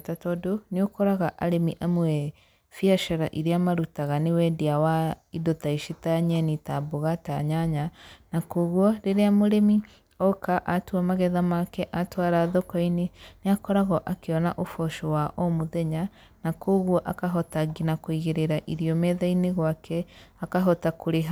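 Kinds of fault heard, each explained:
No technical fault can be heard anywhere in this speech recording, with the signal holding steady and continuous throughout.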